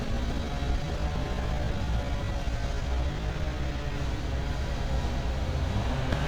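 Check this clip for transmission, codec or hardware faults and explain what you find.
Three faults are audible. From 0.0 to 3.98 s the sound drags at about 0.73 times normal pace while pitch holds. This is likely a time-stretched section, with short pieces repeated to fill length. A brief glitch at 1.81 s and another from 6.10 to 6.13 s come from damaged data in a compressed stream: the decoder misreads corrupted frames and resyncs at the next header.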